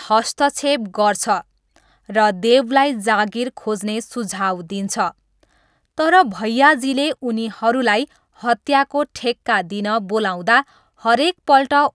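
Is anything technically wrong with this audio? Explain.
No, nothing technically wrong can be heard here.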